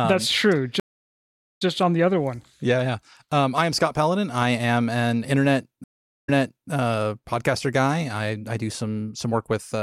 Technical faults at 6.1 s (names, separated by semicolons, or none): stream reconnect